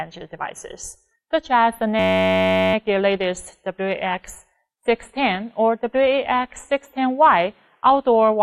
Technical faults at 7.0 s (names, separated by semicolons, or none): none